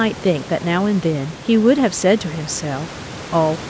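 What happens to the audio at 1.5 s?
Nothing goes wrong at 1.5 s: the speech passes through intact, with only the room noise underneath and the call path's band limit at 8 kHz.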